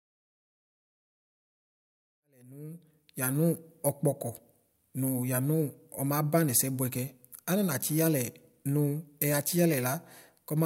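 Nothing stood out on listening to this speech clip, apart from a smooth fade-in from around 2 seconds that reaches full level at 3.61 s.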